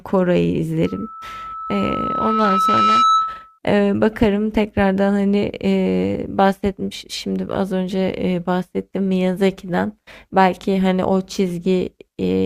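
A 1.3 kHz tone swells over about two seconds into a loudspeaker feedback squeal from 0.85 to 3.59 s, the microphone re-amplifying its own loudspeaker.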